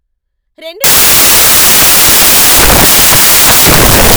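From 0.84 s to the end, the speech turns into samples built from the wrong bytes. The reader assembles each sample incorrectly. It may be off by one byte, swap the byte order, or assume the wrong alignment. The rapidly changing low bits end up as the large part of every value. The result is loud, harsh broadband noise in place of the speech, close to white on the louder sounds.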